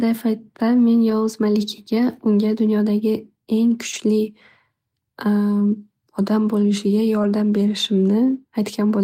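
At 1.09–1.11 s, 3.93–3.95 s and 7.23 s, a lost packet rebuilt from error correction leaves a brief rough, noisy patch with no gap. Each 20 ms stretch plays a low-bitrate copy instead. A spectrogram shows grainier, smeared detail, while the waveform stays continuous.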